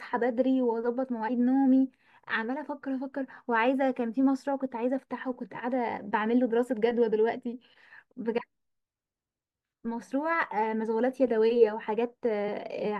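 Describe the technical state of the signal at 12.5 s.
At 12.47 s the decoder drops compressed frames: a short run of the coded stream is either absent from the file or rejected as damaged, so it never plays. The jump, roughly 50 ms, points to about two frames of 23.2 ms each going missing. The speech skips forward by that amount.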